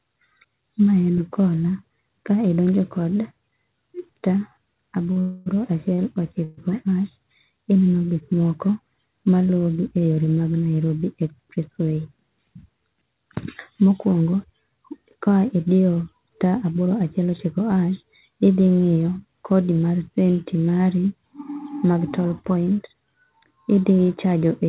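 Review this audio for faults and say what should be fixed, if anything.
Short stalls from a late packet occur at 5.12 to 5.18 s and 5.94 to 6.00 s. Each time, a packet arrived late, so the receiver held the last sound for about 38 to 39 ms and then resumed. On a spectrogram this appears as a brief smeared, frozen slice of harmonics. Deeper jitter buffering would prevent it.

Call audio freezes run from 5.20 to 5.48 s (261 ms) and from 6.44 to 6.59 s (134 ms). The likely cause is packets held up in transit, which emptied the buffer. The last sound carries on as a fading buzz, never fully silent. On a waveform, a decaying repetitive pattern appears before normal audio resumes. Fixing network congestion or packet prioritisation would prevent it.

Jitter buffer speed-up occurs at 11.26 to 12.14 s, at 111% speed with about a tenth of a second trimmed, and at 21.69 to 24.33 s, at 110% speed with around a third of a second trimmed. 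Short pitch-period pieces were cut, so the speech sounds hurried at unchanged pitch. A spectrogram shows compressed syllables with steady harmonic spacing. Gentler, slower buffer drain would prevent it.

The call path cuts everything above 4 kHz, which fits a narrowband G.711 codec.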